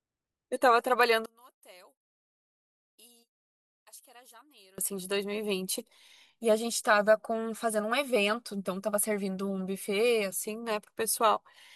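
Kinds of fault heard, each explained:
One channel inverted: the polarity of one stereo channel has likely been reversed, so when the two channels are summed to mono, the content they share cancels instead of adding. From 1.26 s to 4.78 s the speech falls by about 28 dB. The centred voice and its low end almost vanish, leaving only a faint trace of whatever differs between the channels, and then full level returns.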